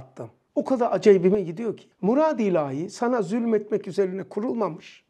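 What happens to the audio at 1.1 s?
A sudden gain jump occurs here: from 1.03 to 1.35 s the digital gain steps up by about 6 dB with no ramp, then returns, which most likely comes from a gain setting or bit shift being applied from one sample to the next. Because the change is applied to the whole signal at once, the sound and its background noise both become louder together for roughly a third of a second, then both drop back to their earlier level.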